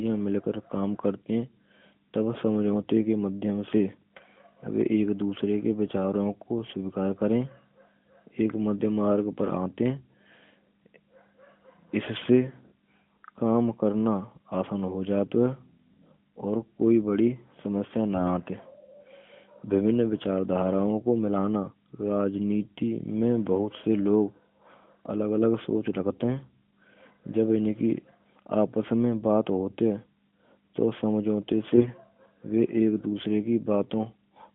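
From 31.74 to 31.90 s, right after "to samjhote", AMR bit errors corrupt weakly protected frame data, turning the sound briefly hoarse, scratchy and gargly.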